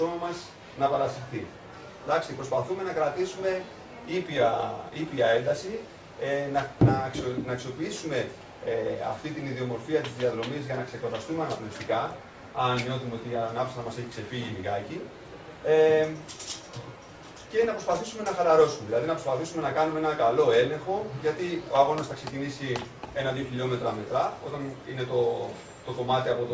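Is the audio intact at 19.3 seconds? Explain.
Yes, the audio at 19.3 seconds is intact, with no dropout, click, distortion or other fault at that moment.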